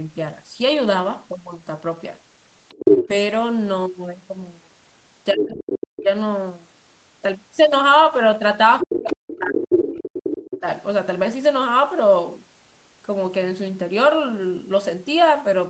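From 2.69 to 3.08 s a second voice comes through, louder than the talker by about 5 dB. This is the other side's voice leaking through, likely because the loudspeaker's sound reached the microphone and the echo canceller did not fully remove it. The same leak returns at 5.33 to 6.03 s at about 5 dB below the talker, at 8.79 to 9.84 s at roughly equal level, and briefly at 10.47 to 10.6 s at about 10 dB down.

During two of those overlaps the talker's own voice sinks and breaks up. From 5.32 to 6.08 s it drops by as much as about 40 dB, with roughly 0.7 s affected. From 8.82 to 10.66 s it falls by up to about 35 dB across roughly 1.5 s. This is speech suppressed in double talk, likely because the echo canceller, hearing both sides at once, could not tell the local talker from the echo and turned everything down together.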